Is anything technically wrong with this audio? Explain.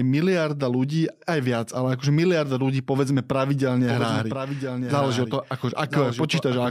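Yes, there is a doubled audio track from 3.87 s to the end. The same audio is likely being mixed in a second time, either captured again through a slower path or held as two out-of-step copies in an edit. The result is an unaltered full-band copy trailing the original by roughly a second, about 5 dB quieter, with no decay or room colour. It cuts in abruptly at 3.87 s and continues to the end, so the speech overlaps itself.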